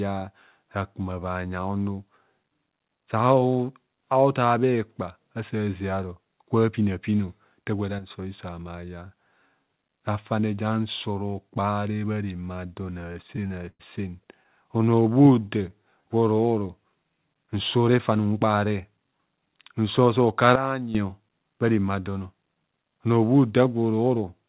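A sudden gain jump hits at 7.99 s. The level drops by about 8 dB in a single step and holds until 8.10 s. Speech and background noise fall together, with no fade, which is the signature of a gain setting likely applied instantly rather than ramped.

Repeated stalls (stutter) run from 12.82 to 13.81 s. The jitter buffer ran dry eleven times, and each time the receiver stretched the last sound to cover the wait. The longest wait was 106 ms. In total 234 ms was filled, about a quarter of that stretch. Nothing is actually lost, but the speech drags and catches.

Jitter buffer slow-down follows from 14.77 to 16.03 s. To rebuild its reserve, the receiver repeated pitch periods and slivers of pauses over and over. That added 158 ms, so delivery drops to 88% speed at unchanged pitch, and the sounds come out drawn out.

Jitter buffer speed-up comes between 17.90 and 19.12 s. Too much audio had piled up in the buffer, so the receiver trimmed short pitch-period pieces repeatedly, about 150 ms in all. 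The speech runs at 110% speed with the pitch held, sounding hurried.

A second sudden gain jump arrives at 20.56 s. This time the level falls by about 12 dB at once, with the speech and the noise floor dropping together. It lasts until 20.95 s. The whole clip sits below 4 kHz, consistent with a G.711 call path at 64 kbps.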